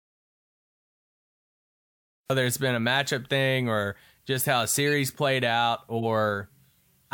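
The clip opens in an audio dropout to silence that is already under way and lasts until 2.3 s, when the speech comes in abruptly on "it's been a matchup". The gap holds no room tone at all. On the waveform it is a flat line, and on the spectrogram a blank black band, which is the signature of silence written while the input was lost, likely through a disconnected device or a mute. Whatever preceded it is gone.

A corrupt frame decoded at 4.87 to 4.91 s, between "or just how a" and "played out", spans roughly a couple of frames. Flipped bits made the decoder place energy at wrong frequencies, heard as a short glitch peaking around -20 dBFS. A second one at 5.98 to 6.05 s, just after "played out", hits about one frame. On a spectrogram each shows as a brief block of misplaced energy unrelated to the surrounding harmonics, and on the waveform as a short spiky burst.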